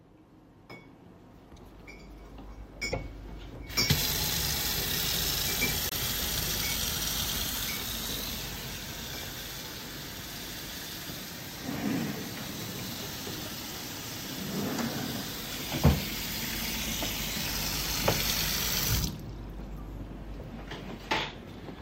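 At 2.91 to 2.94 s and again at 5.89 to 5.93 s the audio jumps ahead, with a brief disruption of about one 26 ms frame at the join. The likely cause is a broken MP3 bit reservoir: after frames were cut, the next frame reached back for borrowed data and decoded bytes belonging to another frame. Unlike a plain dropout or click, the material skips forward.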